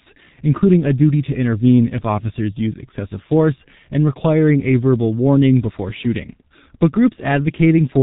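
Throughout the speech, the signal has been squeezed through the G.723.1 codec. Its heavy coding damage points to a very low rate of around 6 kbit/s, with the sound rebuilt from a coarse, slowly updated model of the voice in 30 ms frames. Nothing above about 3.8 kHz survives, so the speech sounds muffled and boxy. The thin, slow-moving model leaves voiced sounds hoarse and rough, and consonants smear into one another.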